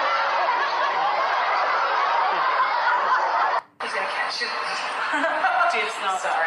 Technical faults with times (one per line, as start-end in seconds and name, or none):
none